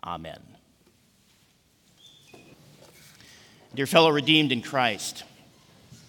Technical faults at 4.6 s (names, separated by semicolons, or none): none